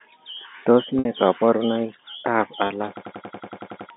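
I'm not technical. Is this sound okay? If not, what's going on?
No. There are two kinds of trouble. First, packet loss with pitch repetition: at 0.99 s about 60 ms of audio went missing in transit, and at 2.67 s another 30 ms. Each time the receiving end patched the gap by repeating the last snippet of voice. At the shorter gap you hear a brief held, buzzy sound, while the longer one fades into silence before the voice returns.

Second, a system hang loop from 2.97 s to 3.90 s: the computer froze while the sound hardware kept replaying the same 93 ms chunk, which fits a 4,096-sample buffer. It repeats ten times, at about 10.8 times a second, giving a machine-gun stutter. Roughly a second of real speech is lost.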